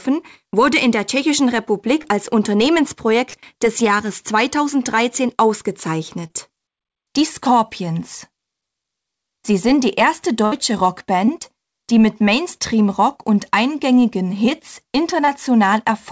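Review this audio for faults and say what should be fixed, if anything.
Brief smears, where the sound wobbles for a moment before settling, occur at 2.02–2.06, 3.30–3.35, 6.27–6.31, 11.26–11.29 and 15.25–15.29 s. These are short concealed packet losses. Each time, roughly 20 ms of audio (40 ms at 3.30 s) arrived too late to decode. The receiver papered over the gap by extending the preceding sound for about 20 to 33 ms, then crossfaded back into the real signal. A larger jitter buffer or forward error correction on the link would prevent these.

At 10.45–10.54 s the sound turns into a held, fading tail and then picks up slightly further on. This is a burst of packet loss. About 60 ms of consecutive audio never arrived, so the receiver stretched the last sound for roughly 61 ms while lowering its level, and the missing stretch is simply gone. The band limit at 8 kHz comes from the G.722 call path, not from these dropouts. 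Fixing the network congestion or adding redundancy such as packet duplication or FEC would prevent bursts like this.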